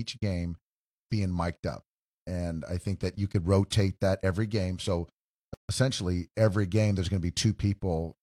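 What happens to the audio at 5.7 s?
Two separately encoded pieces were joined without trimming the encoder's start delay and end padding, leaving a gap at the join. The speech drops into silence from 5.54 to 5.69 s, about 149 ms, with smeared edges, then resumes unchanged at "essentially every game there's".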